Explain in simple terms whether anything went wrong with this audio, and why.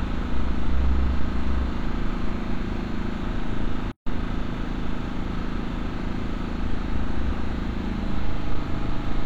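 Two things go wrong here. First, there's hard clipping from about 0.38 to 1.50 s and again from 8.25 to 8.74 s. The sound got louder than some stage in the chain could handle, so the tops of the loudest peaks were simply sliced flat. Those squared-off peaks add a gritty crackle on top of the sound. It's fairly mild, since the overload isn't huge, but you can hear the roughness on the peaks in both stretches.

Second, there's a gap at a join of encoded pieces, running from 3.92 to 4.07 s. The audio drops out in a gap of about 150 milliseconds, with softened edges, and then picks up exactly where it left off. That happens when the audio was compressed in separate chunks and then stuck back together without trimming. Each chunk carries a bit of built-in silence at its start and some padding at its end, and here that leftover silence lands right in the middle of continuous sound.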